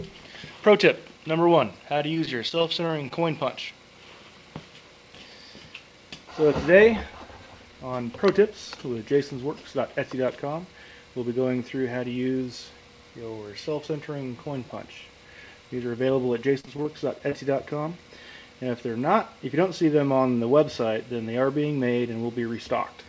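Repeated packet loss (robotic sound) appears twice in this call audio, which carries nothing above 8 kHz, as fits a G.722 call codec. From 1.98 to 3.24 s, a run of short holes (none longer than 20 ms) is patched by extending the preceding sound, giving a choppy texture with pieces missing. From 16.60 to 17.33 s the same happens, with gaps up to 33 ms. In both bursts the losses follow each other too closely for the concealment to recover in between.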